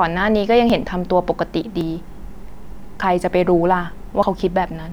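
At 0.70, 1.81, 3.02 and 4.23 s the speech jumps ahead about 50 ms, with no silent gap, unlike a dropout. The likely cause is a dropped buffer (overrun).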